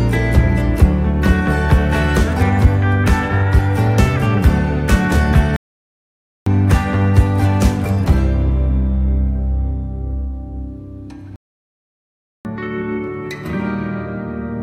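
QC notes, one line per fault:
5.56–6.46 s and 11.36–12.45 s, playback stall: the audio drops out abruptly in mid-flow for about 0.90 s and then about 1.09 s, and each time it resumes afterwards. These pauses likely come from the player running short of buffered data or its output thread being held up, so nothing reaches the output until it recovers. On a waveform each gap is a flat line. On a spectrogram it is a blank vertical band with hard edges at both ends.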